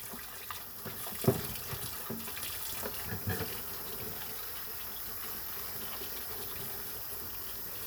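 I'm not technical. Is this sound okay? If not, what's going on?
Yes, nothing wrong turned up on listening, so there's nothing here to fix.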